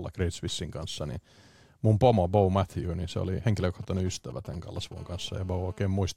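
A short speech recording with two kinds of mobile-phone interference near its end. Right after "niin se oli", from 3.60 to 4.94 s, GSM signalling bursts appear. They form a galloping dit-dit-dit of short buzzes at about 217 Hz, sitting well below the speech. A nearby 2G phone is exchanging short control transmissions with its network. The audio circuit rectifies those radio pulses, turning them into audible clicks and buzz fragments. From 4.97 to 5.87 s the pattern changes to a continuous GSM phone buzz. It is a hard, raspy tone at 217 Hz, rich in harmonics, at about -29 dB relative to the speech. The tone has nothing to do with the speech. This steadiness fits a phone now in an active call. Its transmitter pulses 217 times a second without pause. The circuit demodulates each pulse, so the buzz stays unbroken to the end of the fault.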